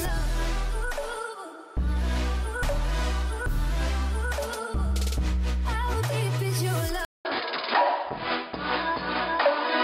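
Input switched to a poorer device, from 7.05 s to the end: after a silence of about 0.2 s, the sound returns narrower and duller, with nothing above 5 kHz. The likely cause is the recording system changing its input mid-take to a lower-grade microphone or a headset's call profile, which passes a restricted band. The loudness stays much the same, but a faint new background noise appears, roughly 50 dB below the signal.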